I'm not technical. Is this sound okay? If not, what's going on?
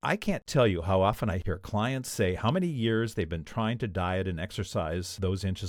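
Yes, this speech recording sounds fine, and nothing in it points to a technical problem. There is nothing here that needs fixing.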